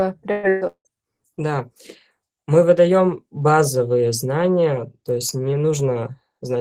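Speech opens with two bursts of packet loss, at 0.31 to 0.46 s and 0.49 to 0.64 s. Each drops about 120 ms, which the receiver papers over by extending the last sound as a held buzz or fading hiss. On a spectrogram these show as smeared, flat stretches where speech detail should be. Right after, from 0.67 to 0.88 s, a longer gap follows, likely a long network dropout. Roughly 180 ms goes missing, and the concealment fades into about 80 ms of near-silence. The waveform shows a dying tail, then a flat stretch, before the audio resumes abruptly.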